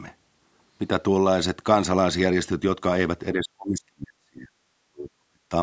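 Speech whose level drops by roughly 40 dB from 3.33 to 4.5 s and 4.85 to 5.53 s: a near-flat waveform and faded spectrogram, likely speech suppressed in double talk.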